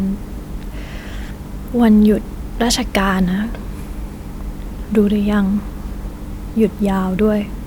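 Nothing in the recording stood out as a technical problem on listening.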